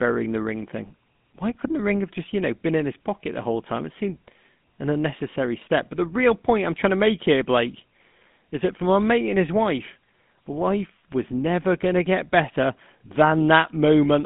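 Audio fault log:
throughout GSM full-rate codec: the speech is held to a phone band of 150 Hz to 3.6 kHz, with nothing above 3.8 kHz, and has a plainly buzzy, gravelly grain from coarse pulse excitation, fitting 13 kbps GSM. That grit sets it apart from plain band-limiting.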